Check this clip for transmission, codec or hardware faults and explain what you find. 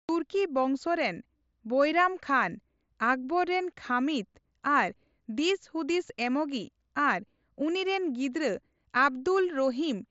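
One fault stands out in this speech, a brief concealed Bluetooth headset packet loss at 6.09 s. It is barely noticeable, lasting about 7.5 ms, consistent with a single lost packet. The receiver filled the gap by repeating the best-matching slice of the waveform just before it, so the voice carries on almost seamlessly. The mSBC link keeps the band up to 8 kHz, with only light grain on louder sounds.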